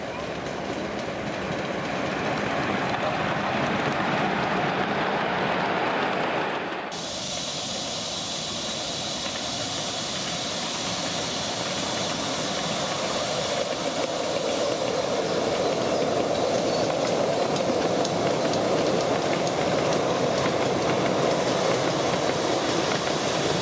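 Nothing here stands out as a technical fault; the sound just runs along steadily with no dropouts, glitches or odd jumps anywhere in the clip.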